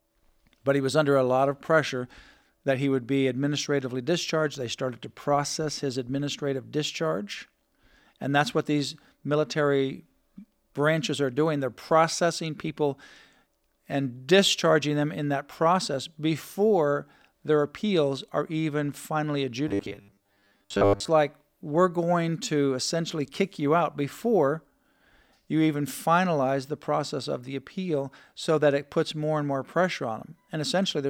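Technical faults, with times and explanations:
19.68 to 21.08 s, robotic sound from repeated short buffers: speech turns into a rigid metallic buzz at 100 Hz, likely because audio arrived late and a 10 ms chunk kept looping, roughly most of the time.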